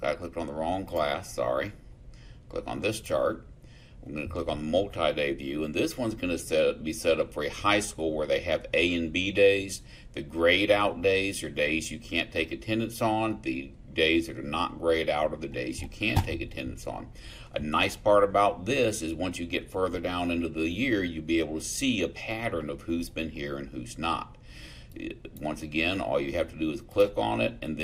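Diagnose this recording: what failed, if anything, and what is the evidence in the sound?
Nothing in the signal points to a failure at any stage of the chain, from the analogue wiring and converter through buffering, format conversion, transmission, storage and playback.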